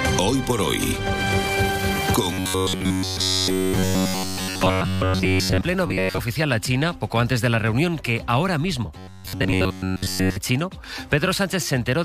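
Rigid metallic buzz near 94 Hz at 2.33–5.61 s, mostly at 5.87–6.19 s, and again at 8.98–10.37 s: robotic sound from repeated short buffers, likely roughly 11 ms loops.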